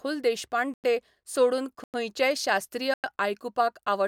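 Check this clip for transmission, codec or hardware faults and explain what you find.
The speech has a gap between chunks that repeats three times: silent holes at 0.74–0.84 s, 1.84–1.94 s and 2.94–3.04 s. The audio was delivered in 1.0-second blocks, and each join was followed by 100 ms of silence before the next block played. Nothing is lost, but the speech stops dead and resumes abruptly. On a waveform these show as flat silent stretches with sharp edges; a spectrogram shows blank vertical bands every 1.1 s.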